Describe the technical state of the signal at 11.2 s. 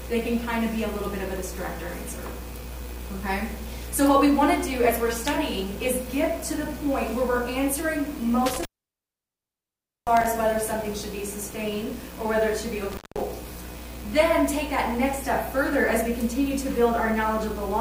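At 11.2 s the signal is intact, with no dropout, distortion or other fault to be heard.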